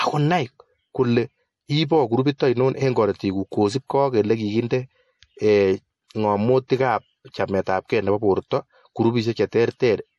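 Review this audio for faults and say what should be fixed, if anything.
The whole clip has a hard ceiling at 11.5 kHz, with nothing at all above it, and the speech has a watery, swirly quality with smeared edges on consonants. That's likely MP3 compression, and the damage is plainly audible. The encoder ran short of bits and chopped off the treble at a fixed point, then dropped weak frequency lines that flicker in and out between frames, which fits a low bitrate of around 48 kbps. To avoid it, record and hand off in a lossless format, or encode at a much higher bitrate.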